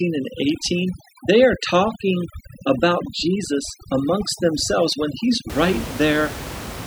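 From the start to about 5.5 s there's overdone noise removal: bands near the roughly 11 dB-down room noise get gated out, leaving twinkly near-silence and taking quiet parts of the speech with them.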